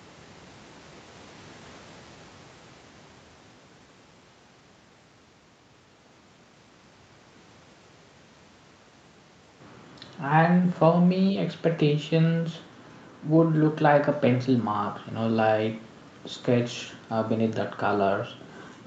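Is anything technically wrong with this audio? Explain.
No, nothing stood out on listening to this speech, which carries the narrowed top end of a call path, with nothing above about 8 kHz.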